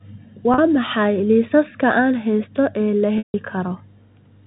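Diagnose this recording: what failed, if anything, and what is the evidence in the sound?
At 0.54 to 0.58 s the speech briefly sticks on a slightly buzzy, held tone. From 3.18 to 3.34 s a longer stretch of about 160 ms buzzes, fades to silence, then cross-fades back. This is packet loss with pitch repetition at the network stage. The receiver filled the missing audio by looping the last pitch period and fading it out. The 40 ms gap fits two lost packets, the longer one about eight, in this G.711 telephone stream.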